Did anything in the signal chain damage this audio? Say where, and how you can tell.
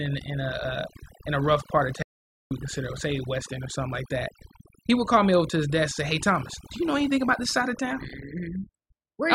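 Yes. The overdone noise removal runs through the whole clip and sits at the call-processing or post-production stage. The background falls to near silence broken by twinkling specks, and the quieter parts of the speech are pulled down along with the noise. An aggressive spectral subtractor is gating individual frequency bands that sit close to its noise estimate. On a spectrogram, the gaps show as black areas scattered with isolated bright dots, and the harmonics look frayed.

The audio dropout to silence runs from 2.03 to 2.51 s, so about 0.48 s of the speech is missing. The sound cuts off mid-flow and returns just as abruptly, and the gap holds silence with no room tone at all. The likely cause is an input lost upstream of the recorder, such as a disconnected device, a failed link or a momentary mute, while the recorder kept writing silence. The waveform shows a flat line, and the spectrogram shows a solid black column.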